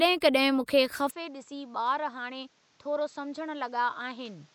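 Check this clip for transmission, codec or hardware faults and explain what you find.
Input switched to a poorer device, from 1.1 s to the end of the clip. At that moment the speech abruptly loses its upper band, with nothing above 7.8 kHz, drops around 10 dB in level and gains a new noise floor roughly 35 dB below the speech, all with no gap at the change. The likely cause is the recording input changing mid-take to another microphone or a headset's call profile, whose narrower band, own level and own noise replace the original path, making the speech sound duller from there on.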